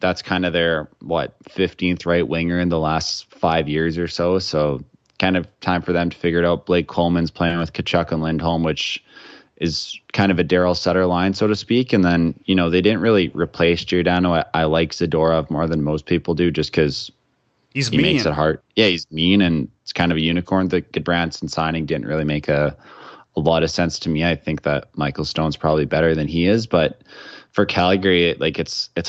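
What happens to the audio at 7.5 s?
At 7.47 to 7.53 s a short stall from a late packet holds the speech for about 30 ms, a stretched, slightly buzzy sound, before continuing with nothing lost.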